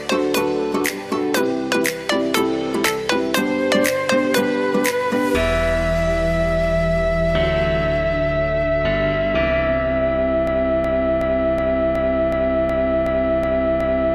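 The audio runs cleanly up to about 10.47 s, then falls into a broken-record loop: a chunk of roughly 370 ms plays back exactly, back to back, about ten times, and it never breaks out, carrying on right to the end of the clip. That kind of stutter most likely comes from the player, encoder or stream stalling and resending the last fragment it had buffered, so whatever should have followed in those last few seconds is simply gone.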